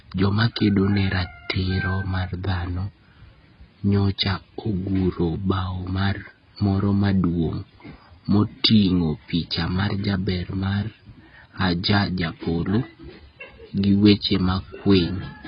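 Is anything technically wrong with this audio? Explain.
Yes. Throughout, the speech sounds dull and smeared, with nothing above 5.4 kHz and a warbly, fizzy texture on sibilants, likely heavy AAC compression at a bitrate as low as 16 kbps.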